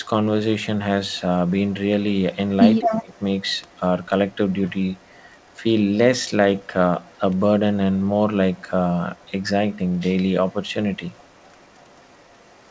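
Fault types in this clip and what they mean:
Echo leak: A delayed copy of the speech returns about 214 ms after the original. This is likely residue from a loudspeaker that the far end's echo canceller did not fully remove. It comes in six stretches. Most are faint, around 35 to 40 dB below the speech. The one from 2.35 to 4.35 s is much stronger, at only about 10 dB down. There it is a delayed copy trailing the first.
Speech suppressed in double talk: From 2.81 to 3.12 s, the speech dips sharply, by as much as about 20 dB, over roughly 300 ms. This falls inside the strongest echo stretch, where both sides overlap. The likely cause is an echo canceller that could not tell its own talker from the returning echo. So it turned everything down, and the speech sounds briefly swallowed.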